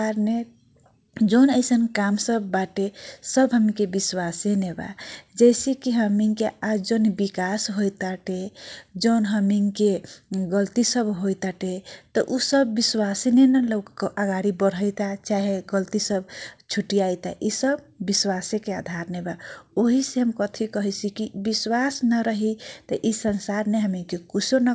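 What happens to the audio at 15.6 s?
At 15.6 s the audio is inside a long run of repeated timing corrections, spanning 1.04 to 24.38 s. The receiver keeps repeating short slivers of sound, pacing playback at about 98% and stretching the run by roughly 0.4 s. Each one is small, heard at most as a faint hiccup or a slight unsteadiness in tempo.

The cause is clock drift between sender and receiver. The sender's clock runs about 1.5% slow, so the jitter buffer keeps draining and must be padded. Unlike packet-loss dropouts, these edits are tiny, always in the same direction, and unevenly spaced.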